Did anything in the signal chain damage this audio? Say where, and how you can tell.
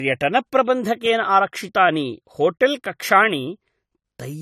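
Yes, at the codec stage, throughout the speech. This looks like low-bitrate audio saved at a high bitrate: the file was likely first squeezed through a low-bitrate lossy encoder, then re-encoded as a generous MP3. Nothing is present above 14 kHz, and the artefacts of the first encode persist from start to finish. The second encode cannot restore what was discarded, so the larger file adds size but no detail.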